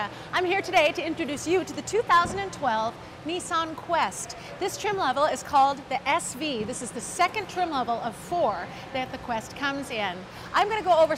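Hard clipping at 0.36–0.38, 0.76–0.87, 2.1–2.19, 5.23–5.65, 7.21–7.25 and 10.57–11.04 s: peaks overdrive a stage by about 3 to 6 dB, flattening tops into harsh, crackly fuzz.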